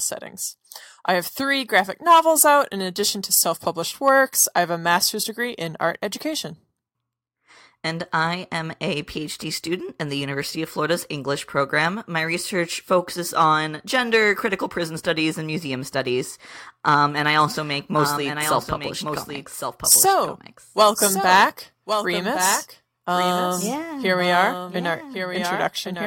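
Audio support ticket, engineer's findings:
Doubled audio track, 17.41 s to end of clip. Second full-band copy of the speech about one second behind, roughly 5 dB quieter, dry, abrupt onset. Likely a slower second capture path or misaligned edit layering duplicate.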